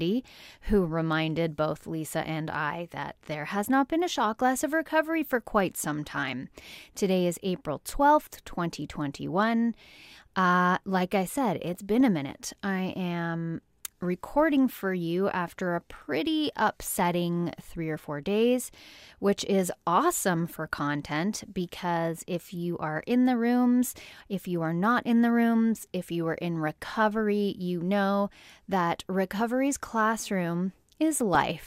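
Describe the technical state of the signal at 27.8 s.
At 27.8 s the speech signal is intact, with no fault present at that moment.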